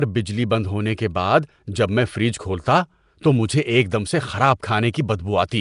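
From start to finish the speech carries a rough, hissy halo and a smeared, underwater quality, with nothing above 10.6 kHz. This is likely Nellymoser compression, whose few bits per block leave weak bands filled with noise, consistent with roughly 44 kbps.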